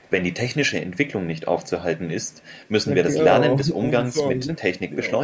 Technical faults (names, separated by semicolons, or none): echo leak; speech suppressed in double talk